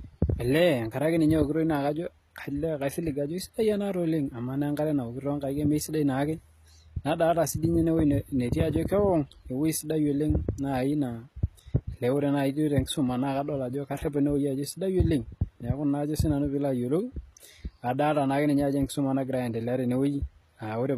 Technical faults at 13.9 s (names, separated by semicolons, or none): HE-AAC compression